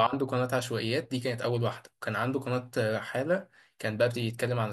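No technical faults can be heard anywhere in the recording, and the speech signal comes through intact with nothing interrupting or degrading it.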